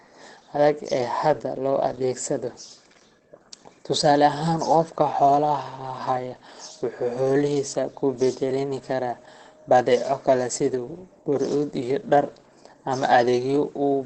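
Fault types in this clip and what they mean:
Opus compression: heavy damage throughout, with nothing above 8.5 kHz. The speech sounds muffled and hoarse, without the swirling holes of MP3. That narrow, rough quality likely comes from Opus's speech (SILK) mode at a very low rate, which fits about 12 kbps.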